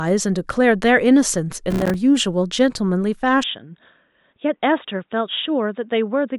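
From 1.70 to 1.94 s there is processor overload crackle: the system repeatedly missed its audio deadlines, and each late buffer dropped out as a brief silence. With around twenty such gaps of a few milliseconds each, which fits a buffer of roughly 3 ms, the speech tears into a gritty crackle.

At 3.44 s, with no gap, the sound turns dull and boxy through to the end. This points to the input likely being switched to a poorer device: nothing is passed above 3.8 kHz, the level falls about 5 dB, and a new noise floor sits about 50 dB below the speech.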